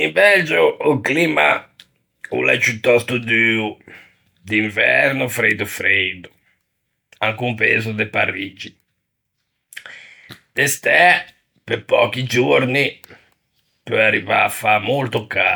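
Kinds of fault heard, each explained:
No technical faults heard.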